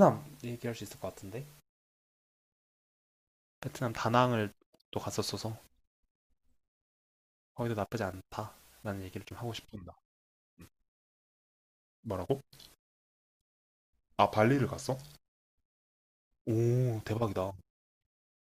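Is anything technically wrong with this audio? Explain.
Yes. Wrong sample rate, 9.58 to 15.02 s: the speech plays at about 0.92 speed with no conversion, which fits 48 kHz audio played at 44.1 kHz, so it sounds slower and about 1.5 semitones lower.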